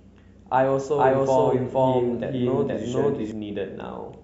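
A speech recording with a doubled audio track from 0.98 s to 3.32 s: a second full-band copy runs about half a second behind at roughly the same level, with no decay or room colour, and cuts in and out abruptly, likely from a slower capture path duplicating the signal.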